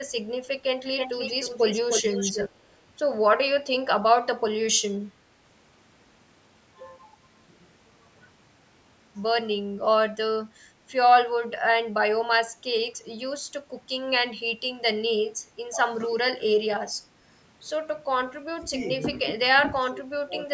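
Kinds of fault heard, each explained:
Echo leak: A delayed copy of the speech follows the original by about 305 ms between 0.97 and 2.49 s, only slightly quieter than the speech itself. The likely cause is a far-end loudspeaker whose echo canceller let part of its microphone pickup return.
Speech suppressed in double talk: The speech dips or cuts out, by roughly 10 to 20 dB, at 11.6, 16.4, 16.6 to 16.9, 18.5 to 18.7, 19.6 to 20.3 and 20.5 s, likely from an echo canceller turning the talker down while both sides spoke.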